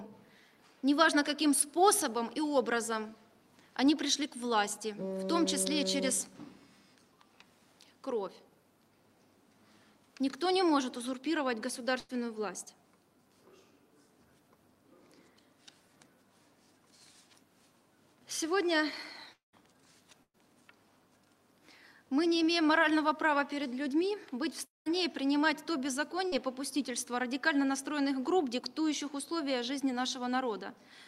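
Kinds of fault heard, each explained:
Burst of packet loss: A short run of audio never arrived in time, and the receiver stretched the last sound to cover it. At 11.99 s about 100 ms is missing. At 20.23 s about 120 ms goes, leaving a fading tail and then brief silence.
Long network dropout: Two longer gaps occur at 19.33 s and 24.65 s, losing about 200 ms and 220 ms. The last sound is held and fades, then silence follows for about 140 ms and 180 ms. The likely cause is an interrupted network link.
Short concealed packet loss: At 26.28 s about 40 ms failed to reach the decoder. The receiver filled it by continuing the previous sound, then blended back. It comes across as a quick smear or wobble rather than an obvious gap.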